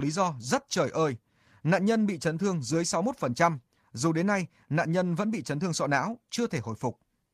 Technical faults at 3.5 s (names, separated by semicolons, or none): none